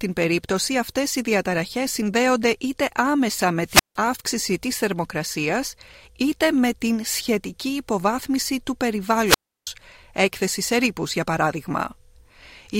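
Two wireless microphone squelch dropouts: at 3.65–3.97 s after "συνδέονται είτε άμεσα με", and 9.25–9.67 s after "την σχετική υποβάθμιση του", before "έκθεση σε ρήπους για". Each time the FM signal fades, hiss briefly swells, then the receiver's squelch mutes the output for about 0.16 s and 0.33 s respectively.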